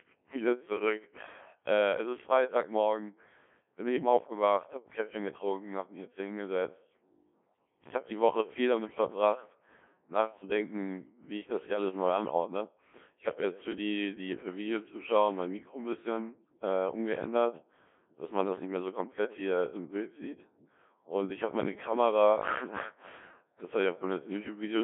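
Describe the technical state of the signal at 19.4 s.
At 19.4 s the speech is under Codec 2 vocoder coding, as it is for the whole clip. The voice is rebuilt from sine waves using only pitch, voicing and envelope, so it sounds robotic and buzzy, not warbly like a waveform codec. It is narrowed to roughly 250 to 3400 Hz, with nothing above 3.8 kHz, and the heavy damage fits about 1.3 kbit/s.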